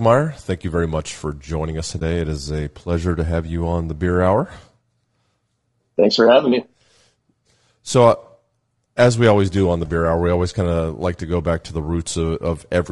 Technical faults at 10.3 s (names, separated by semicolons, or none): low-delay AAC compression